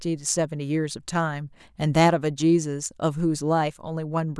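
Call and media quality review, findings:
No faults found in this speech clip. No component flagged for follow-up.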